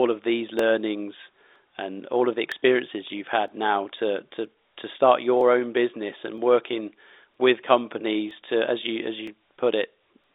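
Clock drift buffer slips, likely from two devices' mismatched clocks, drop or repeat a block every 0.97 s from 0.59 to 10.24 s, clicking regularly.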